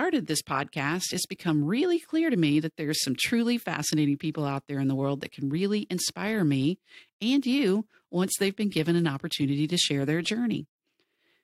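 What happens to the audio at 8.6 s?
Nothing goes wrong at 8.6 s; the speech continues intact through that moment, with no dropout, click or distortion.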